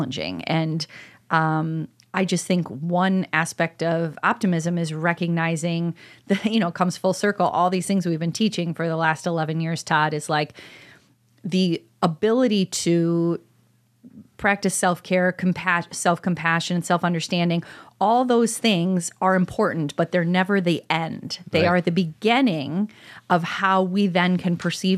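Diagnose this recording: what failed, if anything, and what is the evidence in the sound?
Nothing in the speech stood out as a fault on listening, so there is no failed stage to point to.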